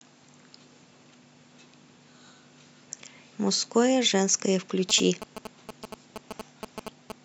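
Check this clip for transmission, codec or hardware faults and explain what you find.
There's one fault, GSM signalling bursts, from 4.90 to 7.12 s: a nearby 2G phone's radio bursts get rectified into the audio, giving a galloping dit-dit-dit of short 216.7 Hz buzzes, roughly 10 dB under the speech.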